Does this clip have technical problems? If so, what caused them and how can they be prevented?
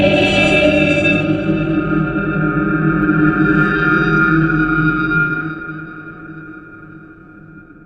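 Yes, there's periodic clock jitter running through the whole clip. Something is wobbling the converter's clock at around 1 kHz, so every component of the sound picks up sidebands roughly 1 kHz above and below it, stronger up high. That's the rough, metallic edge that vanishes in silence. To prevent it, give the converter a clean, well-isolated clock and keep interference away from its supply and clock lines.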